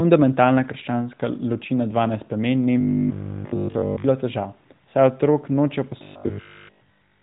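From 2.80 to 4.04 s the speech collapses into a rigid, metallic buzz pitched at 50 Hz, and after "saj otrok nočejo" the same robotic sound from repeated short buffers returns from 6.03 s to the end. Almost nothing new gets through; the likely cause is a starved audio stream replaying its last 20 ms chunk over and over, all within AMR-NB narrowband audio that stops near 3.8 kHz.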